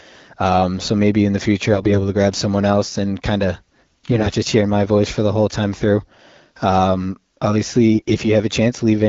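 Speech over wideband AMR, with clarity that fits a rate around 12.65 kbit/s. AMR bit errors make it hoarse, scratchy and gargly at 1.68 to 1.98 s, 4.12 to 4.36 s and, worst, 7.94 to 8.28 s. Flipped low-priority bits misplace the excitation pulses and skew the pitch and gain detail. Pitch and loudness still hold, unlike the gaps, muting or smeared repeats of lost frames.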